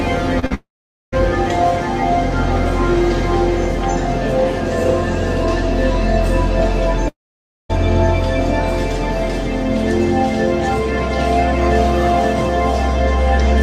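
Short concealed packet loss hits twice in quick succession, at 0.39 to 0.44 s and 0.46 to 0.52 s. Small pieces of the stream arrived too late to decode, and the receiver patched each hole by extending the sound just before it. The first patch runs about 30 ms, the second about 40 ms, and the gaps they cover lose 20 ms and 40 ms of the original. Each is heard as a quick smear or wobble, and whatever fell inside is gone.

A long network dropout is the likely cause of what follows immediately, from 0.54 to 1.14 s. Nothing reaches the receiver, so it stretches the last sound into a fading buzz or hiss. About 470 ms of silence follows, and the audio returns with roughly 580 ms missing. The same thing happens again from 7.08 to 7.71 s. A brief concealment tail leads into about 560 ms of silence, and around 620 ms of the original audio never comes back.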